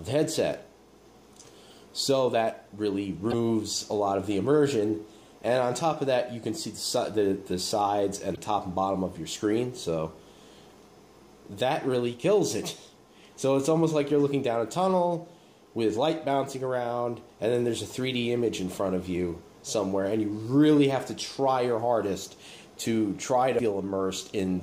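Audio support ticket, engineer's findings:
Damaged data in a compressed stream, three short hits: 3.28 to 3.34 s, 8.32 to 8.38 s, 23.55 to 23.61 s, each about 55 ms. Probable component: the encoded file or stream, upstream of the decoder. Mechanism: a stretch of bad bytes, so the decoder can't parse those frames, drops sync and hunts for the next valid header. That gives a brief glitch or gap in the sound at each spot, chirp, squawk, click or hole.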